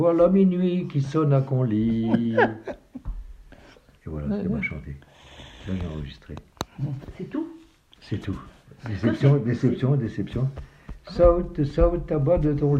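No technical faults can be heard in the audio, so there is nothing to describe in time order.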